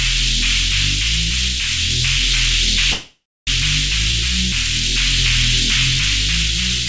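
At 2.92 s the sound stalls until 3.49 s, a call audio freeze, likely from packets held up so the jitter buffer ran dry. The last sound trails off as a fading buzz or hiss into 280 ms of silence, then resumes where it stopped, 0.55 s late.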